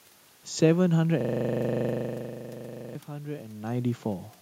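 From 1.21 to 2.95 s, a system hang loop repeats one 40 ms slice of speech exactly, a rigid 25 Hz buzz rather than dropout gaps.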